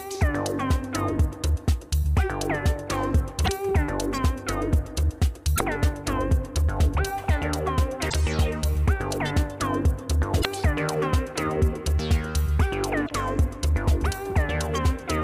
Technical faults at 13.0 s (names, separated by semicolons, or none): damaged data in a compressed stream